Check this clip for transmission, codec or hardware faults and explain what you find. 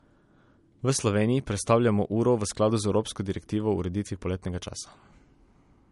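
One codec fault runs through the whole speech clip. The speech sounds dull, with nothing above 11.2 kHz, likely low-bitrate audio saved at a high bitrate: an earlier coarse MP3 pass, perhaps near 48 kbit/s, re-encoded much higher without restoring the lost detail.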